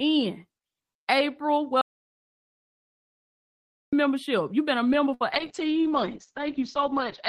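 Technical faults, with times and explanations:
1.81 to 3.93 s, audio dropout to silence: the speech stops mid-flow and about 2.1 s becomes dead digital silence with no room tone beneath it, then speech resumes abruptly. That points to input likely lost and silence written, unlike a concealed network gap, which fills briefly with sound.
5.14 to 5.22 s, burst of packet loss: for about 60 ms the receiver stretches the last sound and fades it into a brief held buzz or hiss rather than true silence, then speech resumes about 60 ms further on, with the part in between skipped.
5.32 s to the end, call bitrate drop: the encoder falls from 32 to 8 kbps and its bandwidth narrows from 20 kHz to 8 kHz, so the speech turns coarse, watery and dull for the last 2 s. It is a sustained loss of detail, not a momentary gap.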